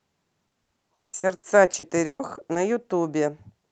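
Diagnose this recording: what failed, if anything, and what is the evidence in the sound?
The failure is at the network stage: repeated packet loss (robotic sound) from 0.47 s to 2.57 s. In that span the speech breaks into a run of 16 short dropouts, the longest about 140 ms. Each hole is papered over by extending the preceding sound, about 760 ms in total, or 36% of the stretch. That gives the choppy texture. The surrounding call audio is band-limited to 8 kHz, consistent with an Opus call codec.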